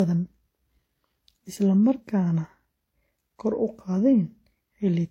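Throughout the speech, the top end stops at 16.2 kHz, and the sound carries two overlapping layers of coding artefacts. This is likely transcoding between lossy codecs: a low-bitrate HE-AAC pass followed by WMA, which re-encodes the earlier artefacts and adds its own.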